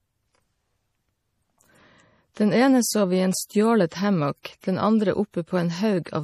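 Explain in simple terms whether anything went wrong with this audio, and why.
The whole speech clip sounds watery and swirly, and the top end stops sharply around 14.6 kHz. That points to likely MP3 compression, which discarded detail to save space.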